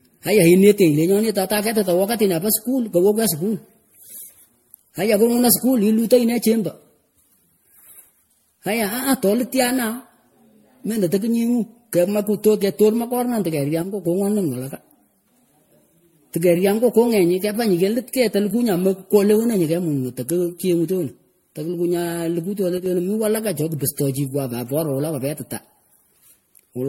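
Throughout, the speech sounds swirly, hollow and smeared, with blurred attacks and nothing above 16.5 kHz: generation loss, likely from about seven passes through a low-bitrate MP3 encoder. From 13.82 to 14.05 s, just after "tekunguh kamakulo ketor makornan", and again from 22.78 to 22.86 s, between "nyay likuh tyonah" and "mih walaka cho kipsroh", the level drops abruptly by about 6 dB. One channel drops out here, likely, leaving the mono sum at half strength.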